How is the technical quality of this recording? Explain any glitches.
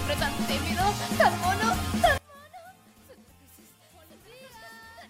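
The recording has one clear fault. From 2.18 s to the end, one channel is likely inverted in polarity. When the two channels are summed, their shared content cancels, so the sound drops by about 27 dB and only a faint remnant of the channel difference remains.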